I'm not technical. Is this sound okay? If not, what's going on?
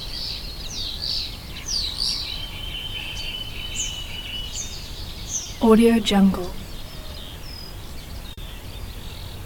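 No, there's short concealed packet loss twice: around 5.43 to 5.47 s, and 8.33 to 8.39 s. Tiny chunks of about 20 and 40 ms arrived too late, so the receiver stretched the preceding sound to cover them, leaving brief smeared blips.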